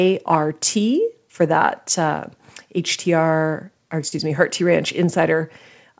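At about 4.08 to 4.14 s the speech briefly smears and wobbles. This is short concealed packet loss. Roughly 40 ms of the call arrived too late for the decoder, and the receiver invented about that much audio by extending the preceding sound before crossfading back into the real signal. The whole clip, with nothing above 8 kHz, carries the sound of a wideband call codec such as G.722.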